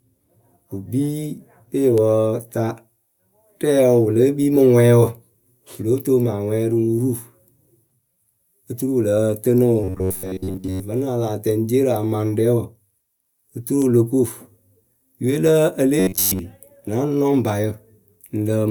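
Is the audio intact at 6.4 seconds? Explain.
Yes, the audio is intact at 6.4 seconds, with no audible fault at that point in the speech.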